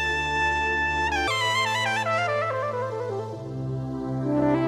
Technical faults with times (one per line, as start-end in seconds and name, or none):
1.28-4.68 section at the wrong speed